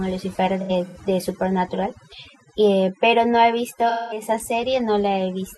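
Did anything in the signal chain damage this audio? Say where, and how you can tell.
Yes. At the call-processing stage, a noise reduction stage was set far too aggressively, causing overdone noise removal across the whole clip. It cuts individual frequency bands whenever they sit near its noise estimate, and the quieter parts of the speech get dragged down with the background. The pauses fall to near silence with faint twinkling specks.

At the codec stage, there is AAC frame loss with concealment, in two places. From 0.60 to 0.97 s, about 171 ms of audio went missing in gaps scattered over roughly 0.34 s, with the longest run around a tenth of a second. From 3.89 to 4.22 s, about 213 ms was lost across five frames. The decoder filled the holes by reusing the last good spectrum, so the first spot sounds smeared and phasey rather than cleanly cut.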